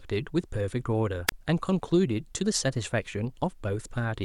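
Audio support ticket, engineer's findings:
Wireless mic RF fade, receiver squelch muting output at 1.27–1.32 s: brief hiss rise, about 30 ms near-silent hole mid-speech, voice returns. Wireless microphone squelch dropout.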